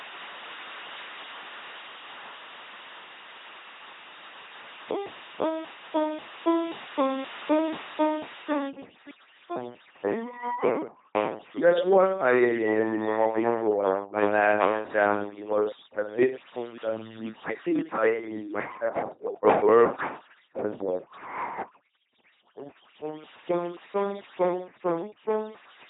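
From the start, the speech carries the heavy damage of an LPC-10 vocoder. Each moment is rebuilt as either a buzzing pulse train or hiss through a ten-pole filter, with nothing above 3.8 kHz, which fits the 2.4 kbit/s military codec. The mechanical robot buzz and the wrong voiced or unvoiced flips set it apart from ordinary low-bitrate warble.

From 8.70 s to the end at 25.89 s, overdone noise removal joins it. The room noise, about 15 dB below the speech, is pulled down and broken into twinkling specks, and the quiet edges of the speech vanish with it. The isolated chirping bands in the gaps distinguish this from a simple gate or a level drop.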